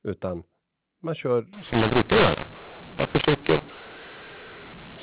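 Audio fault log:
1.53 to 5.02 s, mu-law and A-law mixed up: from here on the speech turns harsh and gritty, with the levels jumbled and the pauses filled with hiss. That sounds like A-law telephone audio being decoded as mu-law, so every sample maps to the wrong level and near-silent ones get pushed up.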